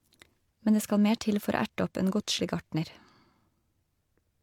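No technical faults can be heard anywhere in the speech, so there is nothing to describe in time order.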